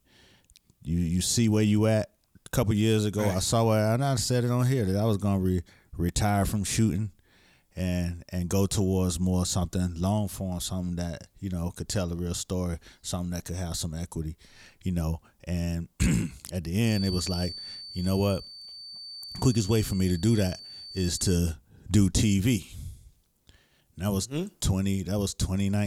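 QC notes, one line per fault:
16.80 to 21.43 s, feedback whistle: a thin, steady tone at 4.6 kHz sits behind the speech, around 15 dB below it, swelling and fading slowly in level without ever growing into a howl. The likely cause is a loudspeaker-to-microphone loop held just short of the feedback point, so that this single high frequency keeps recirculating and ringing at a low level rather than building up uncontrollably.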